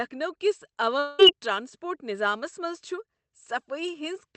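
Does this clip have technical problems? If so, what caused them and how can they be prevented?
Yes. From 0.99 to 1.21 s, a long network dropout is the likely cause. About 0.2 s of audio is lost and filled almost entirely by a fading, buzzy continuation rather than a brief click from a single lost packet. A steadier network link, with forward error correction and a deeper jitter buffer, would prevent it.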